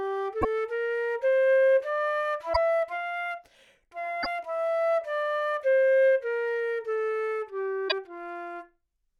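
At 0.41, 2.52, 4.22 and 7.88 s the audio jumps forward and then breaks up for about 44 ms each time, less than two frames of roughly 26.1 ms. This is a broken MP3 bit reservoir. Frames were most likely dropped from the stream, so each following frame looked back for borrowed data and found bytes from the wrong frame. The first frames after every cut decode as garbled sound before playback recovers.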